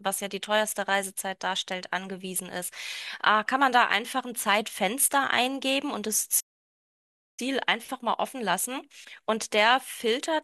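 At 6.40 s the speech cuts out in mid-flow and stays silent until about 7.40 s, a gap of roughly 0.98 s. This is a playback stall, most likely the player running dry of data or having its output thread blocked. The sound simply stops, then carries on. On a waveform it shows as a flat line nearly a second wide; on a spectrogram, a clean vertical band of empty black across all frequencies.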